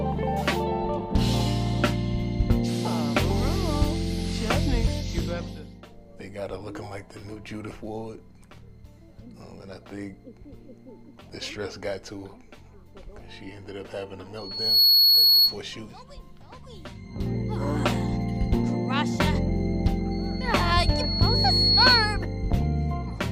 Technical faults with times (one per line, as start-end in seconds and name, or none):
14.37-15.59 loudspeaker feedback squeal
20.11-22.25 loudspeaker feedback squeal